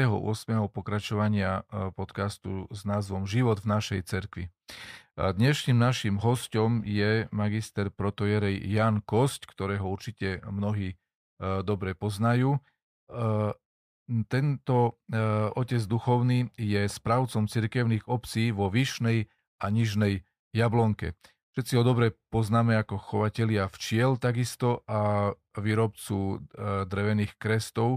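No technical faults can be heard anywhere in the speech. Nothing in the recording calls for a timestamp or a note.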